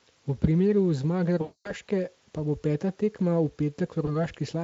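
VoIP packet loss concealed by the speech codec hits at 1.41–1.74 s, between "primeru zmage" and "pa bo peta". About 240 ms is stretched into a buzzy tone or coloured noise that fades. A brief repeat occurs at 4.05–4.16 s.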